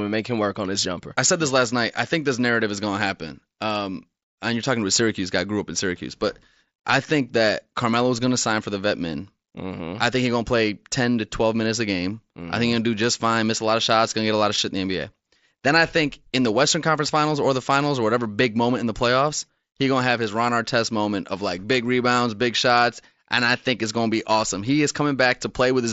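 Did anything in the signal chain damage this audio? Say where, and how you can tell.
No, nothing in the chain damaged this audio; the speech comes over a Bluetooth headset link using the mSBC codec, which caps it at about 8 kHz, and that's just how this path normally sounds.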